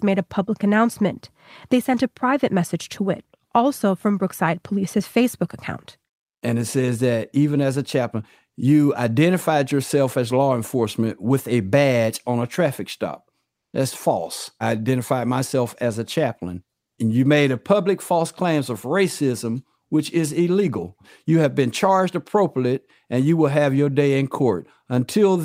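From 13.53 to 13.73 s: comfort noise in place of the background, likely from Opus DTX. A steady hiss about 7 dB quieter shows as a smooth, textureless spectrogram patch.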